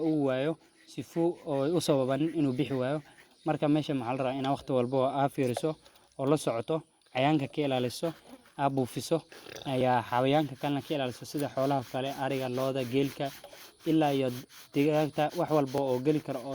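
Overlap between stream segments, with segments roughly 2 s long, clips a few to 15 milliseconds from the speech, causing small clicks or skips at 1.85, 3.84, 9.81, 11.79 and 15.78 s.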